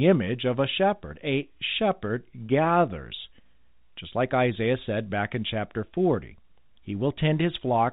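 From 2.47 to 2.49 s, packet loss with pitch repetition: 30 ms went missing, pointing to one dropped packet, and the looped pitch period leaves a brief, held, buzzy sound.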